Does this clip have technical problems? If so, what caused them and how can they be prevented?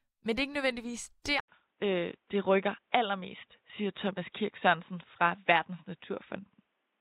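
Yes. At 1.40 s, right after "er ikke nødvendigvis der", the speech drops out for 80 ms and then returns duller and boxier through the end of the clip, with a level shift of a few decibels and a faint new noise floor. The likely cause is the input switching to a poorer device. On a spectrogram, everything above 3.8 kHz vanishes from that point, and the waveform shows a brief flat gap. Locking the recording to one fixed input device prevents this.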